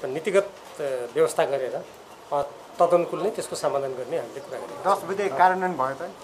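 A repeated buffer at 2.43 s: a piece about 1.45 ms long, which fits a 64-sample buffer, plays three times with hard joins, heard as a brief click or buzz. A waveform shows identical tiny cycles; a spectrogram shows a thin vertical broadband streak. Practically nothing is lost.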